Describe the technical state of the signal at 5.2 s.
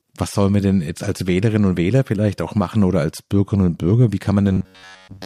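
At 5.2 s the speech is in robotic sound from repeated short buffers, running from 4.52 s to the end. Starved audio is likely being padded by looping a roughly 10.7 ms slice, giving a rigid metallic buzz at 93.8 Hz over most of the sound. The waveform shows identical repeating cycles, and the spectrogram shows evenly spaced harmonic stripes.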